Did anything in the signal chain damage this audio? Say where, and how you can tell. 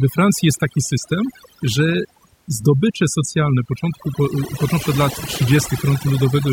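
Yes. Overdone noise removal in the processing stage runs throughout. Bands near the noise estimate are gated off, leaving twinkling specks in near silence, and quiet parts of the voice go with them.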